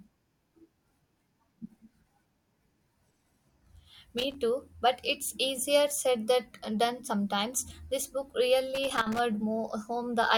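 Loose connector crackle at 4.18 to 4.35 s, just before "too but it's easier", and again at 8.75 to 9.19 s: a worn contact intermittently breaking, chopping the speech into scratchy bursts.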